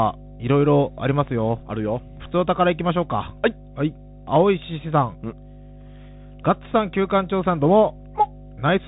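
From the first second to the end, a steady 50 Hz mains hum sits under the speech at a fairly strong level, roughly 20 dB below it. A ground loop or nearby transformer is leaking the power line into the signal. It sounds like a constant low drone with some low harmonics.

Throughout the clip, the speech also carries the marks of a Bluetooth CVSD headset codec. Nothing above about 3.8 kHz survives, so the sound is narrow and muffled. The codec tracks the waveform one bit at a time, and loud high sounds outrun it. They distort, s sounds turn scratchy, and a grainy hiss runs underneath.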